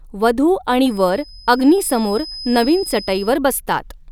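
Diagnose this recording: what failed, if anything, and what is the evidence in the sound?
A feedback whistle sits under the speech from 0.82 s to 3.40 s: a thin, steady tone at 5 kHz, roughly 20 dB below the voice, swelling and fading slowly in level but never building up. The stage is the acoustic path ahead of the mic. The likely cause is the loudspeaker feeding back into the microphone with loop gain parked just under the runaway point, so that one frequency keeps ringing without taking off.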